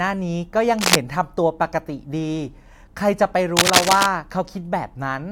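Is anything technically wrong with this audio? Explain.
Yes. There are two bursts of cable scratch noise, from 0.79 to 0.96 s and from 3.57 to 4.06 s. Each is dense, uneven scratching or rustling that sits roughly 5 dB above the speech. The likely cause is a worn cable, connector or control being moved, so its contact resistance shifts rapidly and injects noise. Isolated clicks would be single sharp ticks, but here the noise comes in dense, uneven bursts.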